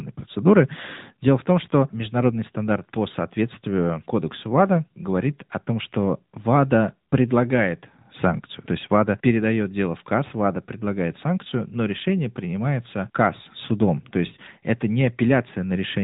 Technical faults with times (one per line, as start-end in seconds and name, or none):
0.00-16.03 AMR narrowband mobile codec